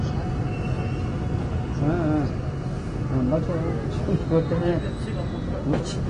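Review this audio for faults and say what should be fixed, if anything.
Throughout the clip the audio is dull, with nothing above 10 kHz and plainly audible coding damage. This is likely AAC compression at a low bitrate, which fits about 32 kbps AAC-LC, where the encoder lowers its cut-off and quantises the remaining spectrum coarsely. To prevent it, encode from the original source at a higher bitrate or keep a lossless copy.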